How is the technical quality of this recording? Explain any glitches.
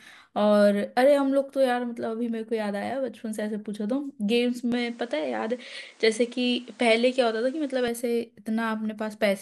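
The recording has one clear glitch. From 4.72 to 7.88 s the speech loses its top end, with nothing above 10.5 kHz, and a new noise floor appears roughly 30 dB under the signal, while loudness stays about the same and there's no gap at either switch. This is likely an input switched to a poorer device, whose narrower band and own hiss replace the original path. On a spectrogram the upper band is abruptly cut flat across that span; the waveform's envelope barely changes.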